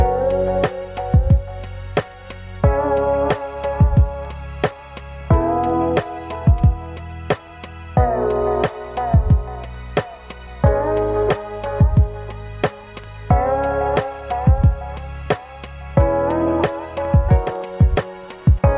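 No technical faults can be heard anywhere in the audio; the signal stays steady and intact throughout.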